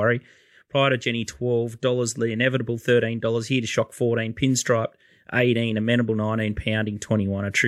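No technical faults can be heard anywhere in this recording of speech.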